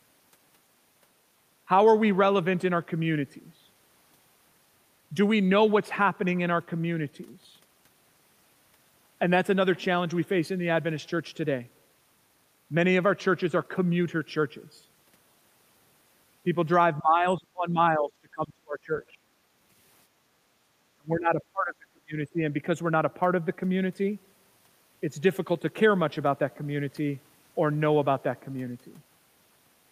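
From 16.99 to 19.24 s the speech is pulled down hard, by roughly 30 dB at its deepest. This is speech suppressed in double talk. The echo canceller likely heard both sides talking at once. It could not tell the talker from the loudspeaker echo, so it turned both down. From 20.07 to 20.62 s the background is gated by the echo canceller. While the loudspeaker plays, the canceller clamps the microphone. The room sound sinks by about 7 dB for half a second, then comes back when the canceller lets go. The speech is suppressed again from 20.97 to 22.16 s, by roughly 30 dB. A short dip of roughly 10 dB follows from 22.33 to 22.38 s. Both come from the same double-talk suppression.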